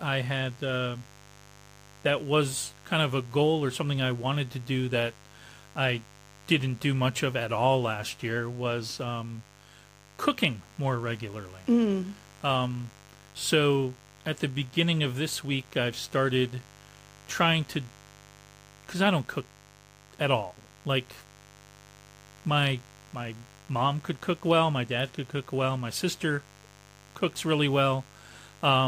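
From the first second to the last, a mains buzz runs beneath the speech, a raspy, steady drone sitting roughly 25 dB below the talker. Sharp switching spikes from the 50 Hz supply, arriving twice per cycle, have leaked into the signal path, so the hum carries a dense ladder of 50 Hz harmonics reaching up into several kHz. On a spectrogram this shows as evenly spaced horizontal lines across the whole clip; the waveform shows a spiky ripple through the pauses.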